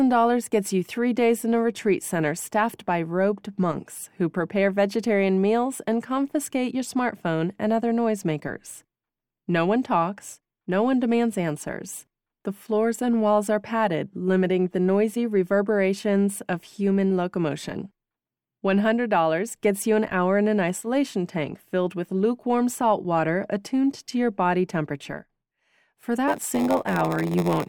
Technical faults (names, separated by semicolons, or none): block size mismatch (padded)